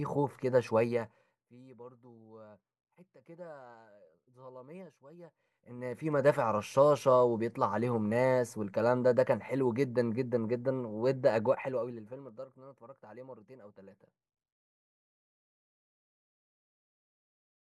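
Zipper noise hits at 0.77 to 1.54 s, 5.2 to 6.3 s and 11.4 to 12.4 s: level ramps of about 25, 25 and 20 dB move in unsmoothed 2 dB jumps, roughly fifteen to twenty a second, so each jump ticks audibly.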